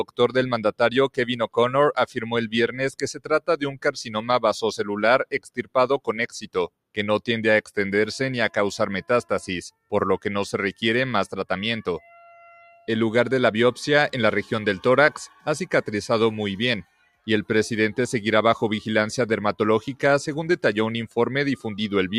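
A noise suppressor built for speech was left running on these sounds throughout, mistaking sustained content for noise, so the level pumps by roughly 5 dB and held sounds thin out.

Sound is cut by the noise suppressor more deeply at 3.14–3.48 s (about 18 dB), 3.72–3.89 s (about 17 dB), 5.32–5.75 s (about 17 dB), 12.56–12.88 s (about 10 dB) and 16.84–17.27 s (about 17 dB). Each time, steady and decaying parts sink in level or their tails are cut short.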